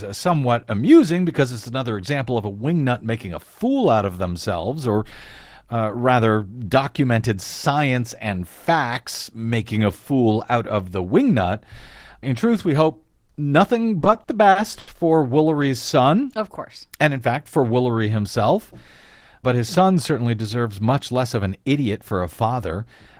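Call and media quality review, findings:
Repeated stalls (stutter), 13.99–14.90 s, right after "truth we hope nothing". Seven short holes, longest 80 ms, about 200 ms of stretched fill in total, nothing lost. Jitter buffer kept running dry on late packets, so the receiver padded each gap with the last sound.

Jitter buffer speed-up, 16.97–17.63 s. Audio runs at about 109% speed, same pitch, a bit rushed. The buffer was overfull, probably after a late burst landed together, so around 70 ms got trimmed out in pitch-period slices to catch up.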